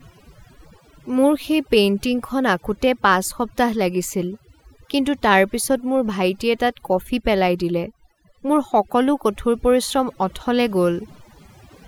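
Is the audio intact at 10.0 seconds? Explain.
No, at 10.0 seconds the clip suffers from overdone noise removal throughout. A noise reducer set too aggressively is suppressing frequency bands near its noise estimate, leaving twinkling specks in near-silent background.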